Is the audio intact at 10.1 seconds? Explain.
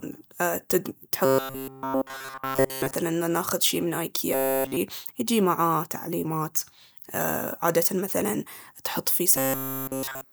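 No. From 9.36 s, right after "عادةً مثلاً تحط فيه", to 10.32 s the speech has robotic sound from repeated short buffers: a rigid, metallic buzz at 133 Hz, likely from one roughly 7.5 ms buffer repeated throughout while the real audio is skipped.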